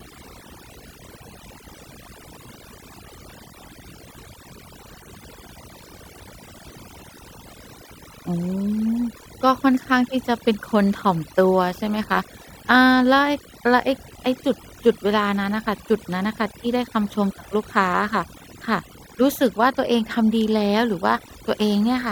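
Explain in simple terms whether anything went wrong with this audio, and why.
Overdone noise removal runs through the whole recording. The background drops and breaks up into twinkling specks, and the voice loses its quieter parts along with the hiss. Ordinary muffling dulls sound evenly, without those specks.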